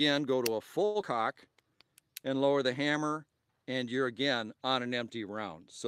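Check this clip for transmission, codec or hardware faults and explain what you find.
Three network-timing faults show up, all packed into the first two seconds.

At 0.85 to 0.98 s there's a short stall from a late packet. A packet didn't arrive in time, so the jitter buffer ran dry and the receiver stretched the last bit of sound for about 95 ms. Nothing is lost, but that moment hangs a beat too long with a slight buzz or dip.

Right after, at 1.01 to 1.05 s, comes a skip ahead. Newer audio was already queued, so roughly 70 ms was dropped and the two sides were spliced together with only a tiny fill. You hear a small jump where a sliver of sound is simply missing.

From 1.49 to 1.78 s there's a jitter buffer slow-down. The buffer was rebuilding its reserve by repeating single pitch cycles, adding 54 ms and running the audio at about 85% speed. The pitch stays put, but things sound drawn out.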